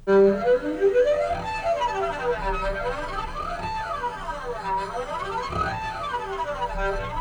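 Listening through the recording, nothing stood out as a technical problem at any point.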